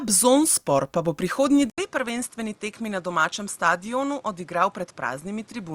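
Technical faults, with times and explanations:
1.70–5.75 s, input switched to a poorer device: after "pa bo prihodnji" an 80 ms gap, then quieter by about 5 dB, duller above 11.4 kHz, with new background noise about 30 dB below the speech; likely another microphone taking over.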